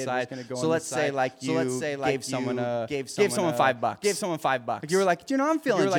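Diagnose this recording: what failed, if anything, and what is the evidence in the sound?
The speech carries a doubled audio track for its whole length: a second, full-band copy trails the original by about a second, a few dB quieter. It repeats once without fading and without any room colour, which separates it from acoustic echo or reverberation, whose repeats decay and pick up the room's tone. The fault is likely at the driver or buffer stage, with the same signal reaching the mix again through a slower capture path.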